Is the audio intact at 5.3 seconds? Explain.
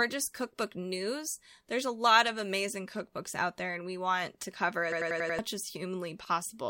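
No. A system hang loop runs from 4.92 to 5.39 s, just after "we want to cover": a frozen driver replays one 93 ms buffer (fitting 4096 samples) five times, giving a 10.8 Hz machine-gun stutter visible as identical repeating waveform blocks, and roughly half a second of audio is lost.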